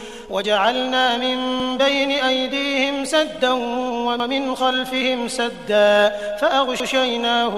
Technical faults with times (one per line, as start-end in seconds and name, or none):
1.60-1.70 overlapping chunks
4.20-4.30 overlapping chunks
6.80-6.90 overlapping chunks